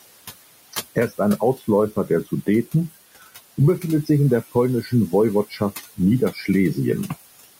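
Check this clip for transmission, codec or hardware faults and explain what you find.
The faults here come from the noise suppressor, not from the link or the hardware: processing artefacts run through the whole speech clip, and two short stretches of speech are cut.

Noise suppressor artifacts are present throughout. The suppressor lowers the room noise, which sits about 16 dB below the speech, by about 18 dB in pauses and lets it back in under speech. The background therefore pumps between words.

Speech cut by the noise suppressor occurs at 4.83–4.92 s, right after "befindet sich in der", with a dip of about 9 dB, and at 5.5–5.61 s, with a deeper dip of about 12 dB. Each lasts roughly a tenth of a second. The suppressor misjudged low-level speech energy as noise and attenuated it, so those fragments sound swallowed and faint.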